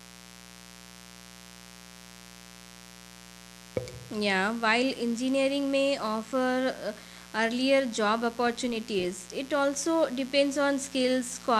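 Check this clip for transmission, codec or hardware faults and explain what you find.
A mains buzz runs through the whole speech clip: switching spikes on a 60 Hz supply, twice per cycle, inject harmonics roughly 20 dB below the speech, heard as raspy buzzing and seen as evenly spaced horizontal spectrogram lines up to several kHz.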